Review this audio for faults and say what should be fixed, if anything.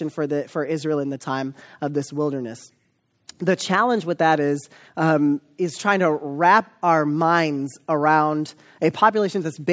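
Nothing needs fixing: the speech has gone through ordinary call microphone processing, which trims the lowest bass and leaves no content above 8 kHz, and no faults can be heard.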